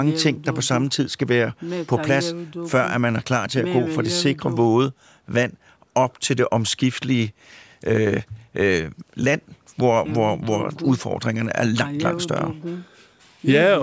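The speech shows no technical faults, and the only processing audible is ordinary call microphone processing, which has removed the lowest bass and leaves nothing above 8 kHz.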